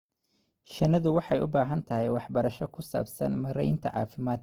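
Throughout the speech, the sound is plainly rough, grainy and noisy. This is likely Opus compression in its music mode, at a low rate near 16 kbps. Starved bands are filled with noise, not left empty. The band still reaches 20.2 kHz.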